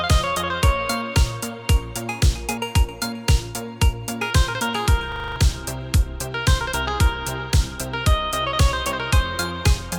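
At 5.12 s a system hang loop sets in: the machine froze while the sound hardware kept replaying one 40 ms buffer, giving a rapid 25 Hz buzzing stutter until 5.36 s, and about a fifth of a second of audio is lost.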